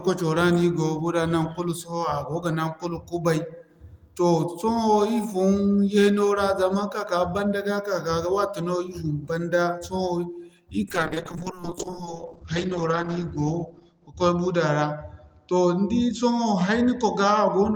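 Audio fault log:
10.91–17.76 s, call bitrate drop: the call's bandwidth estimate fell and the encoder went from 32 kbps to 8 kbps, sitting at its lowest for 2.43 s. Coarser coding and a band cut from 20 kHz to 8 kHz leave the speech muffled and rough until the clip ends.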